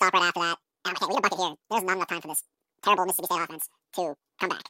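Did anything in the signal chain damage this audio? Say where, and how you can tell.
Yes. The damage happened at sample-format conversion, where the audio was read two samples at a time (double speed). From start to finish the speech runs at exactly twice its natural rate and sits a full octave high. A reader that treats pairs of samples as one frame, as if the data had two channels or samples twice as wide, causes this. A clean resample to the wrong rate would shift pitch just as far.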